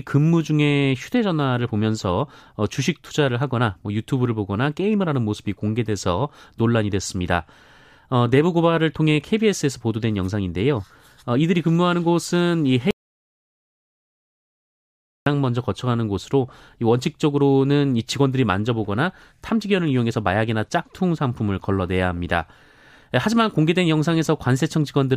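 Audio dropout to silence from 12.91 to 15.26 s in this speech: about 2.4 s of silence with no room tone, likely from a lost input while recording continued.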